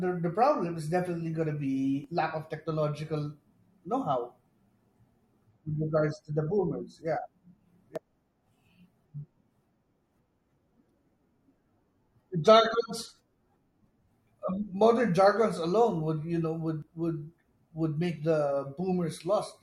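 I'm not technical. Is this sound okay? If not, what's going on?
No. The speech jumps briefly at 2.04 s (after "is definitely going to"), 7.96 s, 13.87 s and 16.82 s (after "alone would you know"). This is likely audio missing between chunks. A tiny slice is lost where the recording was split into pieces, and the ends are joined with no silent gap, unlike a dropout.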